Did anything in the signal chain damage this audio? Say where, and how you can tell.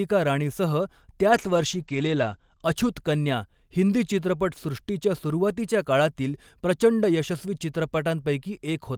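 Yes: a call bitrate drop in the codec stage, from 1.31 s to 3.69 s, ending just before "हिंदी चित्रपटसृष्टीच्या सुरुवातीच्या काळातील". The encoder's rate falls from 32 kbps to 12 kbps, bottoming out for about 1.07 s, so the speech turns coarse and muffled. At that rate Opus narrows its coded band from 20 kHz to 8 kHz. On a spectrogram everything above 8 kHz vanishes as a flat ceiling across that span, with blurrier harmonics below it.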